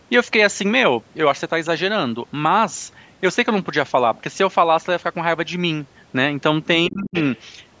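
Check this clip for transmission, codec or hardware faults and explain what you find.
Two faults sit together at the very end of the speech, both consistent with echo cancellation in a call path. The band limit, with nothing above 8 kHz, is ordinary call microphone processing.

Speech suppressed in double talk, 6.88 to 7.15 s: the talker's level drops sharply, by roughly 30 dB at its deepest, for about a third of a second, nearly cutting out. The likely cause is an echo canceller facing both ends talking at once. It could not separate the local voice from loudspeaker echo, so it attenuated both.

Other side's voice leaking through, 7.15 to 7.4 s: immediately after the dip, a second voice surfaces about 15 dB below the talker. This is likely residual loudspeaker pickup that the echo canceller failed to subtract from the microphone signal, letting the far end's speech bleed back faintly.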